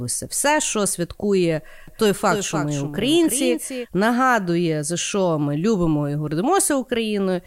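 From 1.88 s to 3.86 s the speech is heard twice. This is a doubled audio track. A second copy trails the original by roughly a third of a second, at around 10 dB lower. It carries the full frequency range, with no decay or room colour, so it sounds like a flat, distinct repeat rather than an echo. The copy switches in and out abruptly at both ends. The likely cause is the audio being captured again through a slower path, or an edit leaving two copies out of step.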